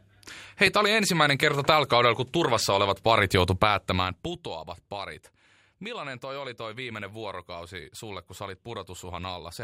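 A loud pop at 0.67 to 0.69 s, likely from a voltage spike such as a plug or switch, sits a few decibels above the speech, which continues underneath.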